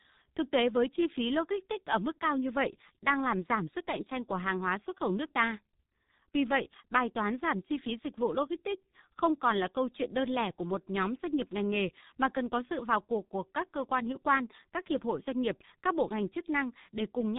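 From start to finish the speech carries heavy G.723.1 codec damage. Nothing survives above 3.8 kHz, so consonants blur and the voice sounds muffled and hoarse. The 30 ms frames and slowly updated voice model at a rate that fits 6.3 kbit/s smear transitions throughout.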